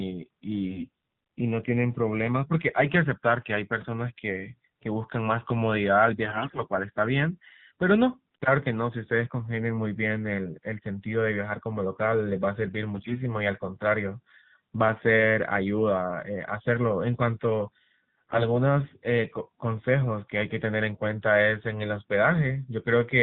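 Throughout, the speech sounds band-limited and buzzy, with a synthetic edge and nothing audible above 4 kHz. This is AMR narrowband mobile codec coding at a low mode, plainly audible and consistent with about 7.4 kbps, where too few pulses drive the vocal-tract model.

At 0.66 to 0.89 s, 6.26 to 6.62 s, 12.96 to 13.20 s and 18.19 to 18.45 s, the voice briefly turns hoarse, scratchy and gargly while keeping roughly its pitch and level. These are AMR bit errors: a weak link flipped several percent of the less protected bits, misplacing excitation pulses and skewing gain and spectral detail.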